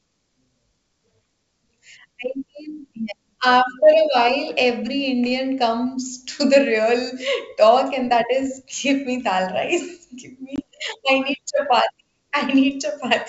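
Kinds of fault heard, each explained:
Packet loss on an ADPCM call, at 10.56 to 10.60 s: one packet's worth of audio, about 20 ms, drops out and is filled with silence, leaving a hole with hard edges in the speech. Because ADPCM decodes each sample relative to a predictor and step size that both ends adapt together, the missing data leaves the decoder's state out of step with the sender's, so the speech comes back after the gap with brief distortion until the two realign.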